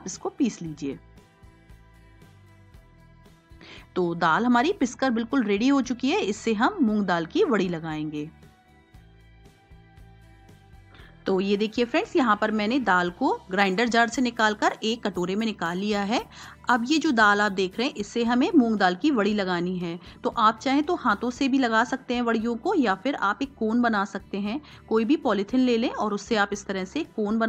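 From 13.59 to 18.01 s, pre-emphasis is left on. The treble boost follows an FM 50 µs curve, but the matching de-emphasis was never applied. Highs sit about 10 dB above 1 kHz at 10 kHz. The sound turns thin, bright and sibilant.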